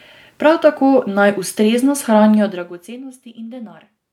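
No technical faults can be heard in this recording.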